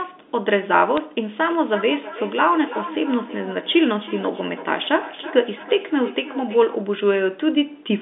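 At 0.97 s there's a brief glitch. That's bit errors on the digital phone line: a flipped bit in the A-law stream throws one sample far off its true value. The error rate is tiny, and the damage is confined to just two frames.

From 1.37 s to 6.82 s you get feedback echo between two devices. A second device in the room replays the call, the microphone picks it up again, and the speech comes back roughly every third of a second, thinner and ringier, peaking about 15 dB below the speech.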